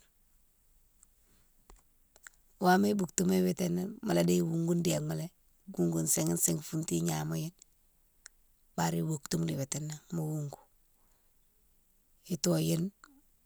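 A speech recording whose signal carries no audible technical fault at any point.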